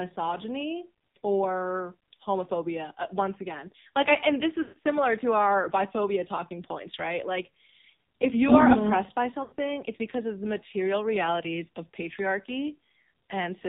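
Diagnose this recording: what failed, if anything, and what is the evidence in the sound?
The speech has nothing above 4 kHz and a heavy buzzy, synthetic quality throughout. This is the AMR narrowband mobile codec, at the codec stage. The damage fits a low mode near 5.9 kbps, where sparse excitation pulses drive the vocal tract model too coarsely.

From 4.62 to 4.77 s and from 9.44 to 9.54 s, the sound stretches into a drawn-out tone that fades toward silence. These are lost AMR speech frames, from radio errors at the network stage. The decoder repeated the last good pitch and vocal tract settings with falling gain. The 140 ms and 80 ms gaps fit seven and four 20 ms frames.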